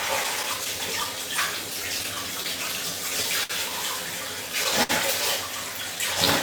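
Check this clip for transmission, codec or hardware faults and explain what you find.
A handful of faults turn up, all pointing to the network path and the receiver's buffering rather than the codec or hardware.

Clock drift between sender and receiver runs through the whole clip. The sender's clock seems to be running roughly 5% slow compared with the receiver's, so the jitter buffer keeps draining and the receiver has to keep patching the timing. It's not one event. You hear it as small hiccups scattered unevenly across the clip, and the timing corrections below are how that drift actually shows up.

Repeated timing corrections run from about 0.37 s to 5.97 s. Because the sender is slow, the receiver keeps repeating short slices to stretch things out, playing back at about 98% speed and adding roughly 100 ms overall. The edits all go the same direction but aren't evenly spaced. Each is tiny, so the effect is a slightly unsteady tempo with the odd hiccup rather than anything glaring.

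Scattered short gaps show up in two stretches. From 0.23 s to 1.07 s there are about four lost or late packets, each around 10 ms, roughly 40 ms patched in total. From 1.84 s to 3.51 s there are about seven, the longest around 70 ms, with roughly 100 ms filled. Each hole gets covered by carrying the last sound forward, so nothing drops out. You hear brief ticks and smears.

A short stall from a late packet comes in at 4.83 to 4.91 s. A packet wasn't there on time, the buffer ran dry, and the receiver held the last sound for 62 ms until it arrived, then picked up where it left off, with the delay shifted by the same 62 ms. Nothing is actually lost. The sound just hangs a touch too long, with a faint buzzy or dipping quality.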